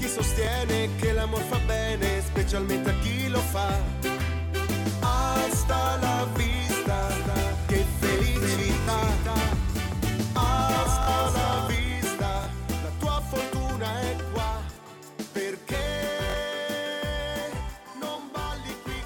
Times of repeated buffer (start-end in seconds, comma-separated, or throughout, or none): 0.45-0.47, 8.81-8.87, 11.03-11.07, 12.44-12.46, 14.74-14.76, 16.30-16.34